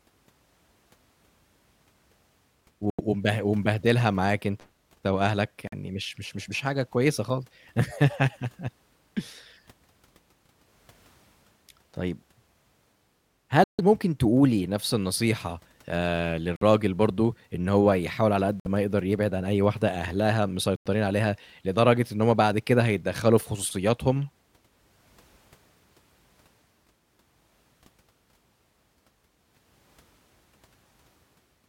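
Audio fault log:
2.90, 5.67, 13.64, 16.56, 18.60 and 20.76 s, Bluetooth stall: speech drops to silence for 50 to 150 ms and resumes, likely a receiver buffer underrun while delayed packets were resent.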